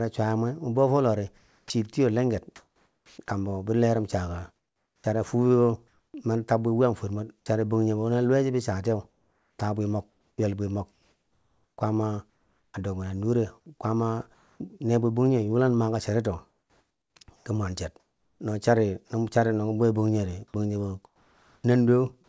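From 1.38 to 3.18 s the sender's voice detector likely judged the pause before "kambo bi lerim" to be silence and stopped sending, so the receiver filled about 940 ms with comfort noise in place of the background: a smooth, detail-free hiss shaped only roughly like the real room. Inside that stretch, at 1.66 to 1.70 s, the same detector was likely late to react when sound resumed, so an onset was clipped by the voice detector. About 40 ms of the start was never sent, and the sound begins abruptly, without its soft lead-in.

From 4.56 to 7.46 s the detector likely toggled between sending and muting more than once. The sound is chopped by the voice detector, with about 740 ms in total swapped for comfort noise. Edges and quiet parts drop out.

Comfort noise replaces the background again from 9.10 to 12.74 s, covering about 2.06 s before "a dobbinen." It returns from 14.34 to 14.60 s, 260 ms before "ne bwe," where the background sits about 40 dB below the loud parts and the fill is about 1 dB quieter. 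It appears again from 16.50 to 18.40 s for 1.16 s, and from 21.06 to 21.64 s for 580 ms. In that last stretch the background sits about 38 dB down and the fill drops about 3 dB. In every case the cause is likely discontinuous transmission.

At 20.52 to 20.54 s another onset is clipped by the voice detector. About 20 ms of the start is missing, so the sound snaps in hard. The cause is likely the detector reacting slowly again.

Throughout, the G.722 call path leaves nothing above 8 kHz.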